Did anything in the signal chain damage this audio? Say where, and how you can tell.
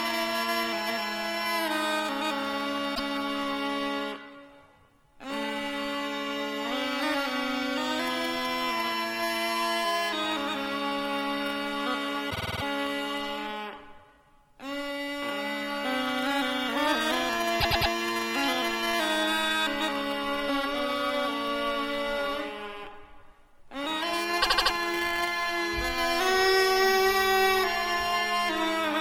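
Yes: repeated frames at 2.94, 12.29, 17.6 and 24.41 s, damage in the compressed stream at the codec or storage stage. Each is a stutter where a short block plays again before the audio moves on: about 105 ms twice at 2.94 s, 52 ms seven times at 12.29 s, 105 ms four times at 17.6 s, and 78 ms five times at 24.41 s. Those block lengths fit whole coded frames of about 26 ms being resent, and the clip gets longer by every repeat.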